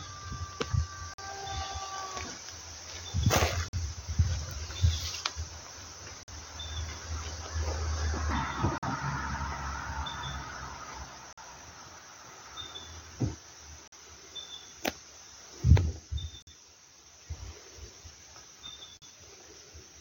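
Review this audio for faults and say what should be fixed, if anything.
The audio is being delivered in 2.5-second chunks with a gap between chunks. Each join has roughly 48 ms of inserted silence, heard as short holes at 1.14, 3.68, 6.23, 8.78, 11.33, 13.88, 16.42 and 18.97 s. Prevent it by trimming codec padding and queueing each chunk before the previous one ends.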